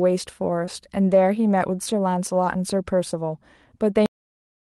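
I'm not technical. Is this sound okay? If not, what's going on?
No. Short concealed packet loss at about 0.65 to 0.69 s: a 20-millisecond piece of the call arrived too late, so the receiver patched the gap by stretching the preceding sound, causing a brief smear. Cut-off end at 4.06 s: the final stretch of audio never got played, so the speech stops abruptly mid-sound and drops straight into silence.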